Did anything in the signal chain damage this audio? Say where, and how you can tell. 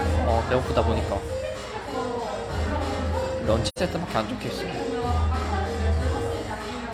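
Yes: AAC frame loss with muting at 3.68 to 3.79 s, a codec-stage fault. The sound fades into a soft-edged gap of about 85 ms and back out, which fits two lost frames whose spectrum the decoder zeroed while the overlapping windows smoothed the edges.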